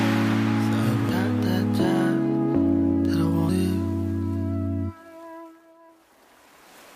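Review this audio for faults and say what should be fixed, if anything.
Audio missing between chunks at 1.09, 3.49 and 5.89 s: the sound skips abruptly, losing about a tenth of a second each time, with the two sides butted together and no gap. The regular spacing likely comes from processing in 2.5 s chunks that drops a slice at each handover.

To prevent it, keep capture continuous across chunk boundaries by queuing or overlapping blocks so the next chunk opens before the previous one closes.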